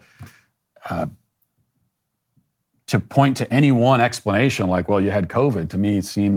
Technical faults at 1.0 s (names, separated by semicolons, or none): none